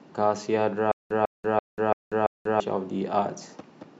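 From 0.92 to 2.60 s the speech breaks into a stutter with silent gaps: a 148 ms fragment repeats five times, each followed by about 189 ms of dead silence, a steady 337 ms cycle. That's likely a stalled stream replaying its last chunk, and the audio meant for that stretch is lost.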